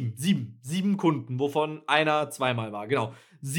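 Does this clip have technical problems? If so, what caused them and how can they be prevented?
No, this clip has no technical problems, so there is nothing to trace to a cause or to prevent.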